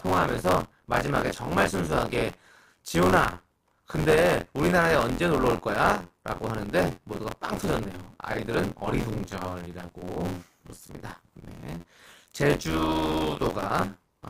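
A robotic buzz at about 86 Hz runs under the speech from start to finish, only while sound is present. This is buffer tearing: writer and reader of the ring buffer have slipped, so roughly a third of each period, which fits a 512-sample buffer, replays audio some forty milliseconds old, joined hard on both sides.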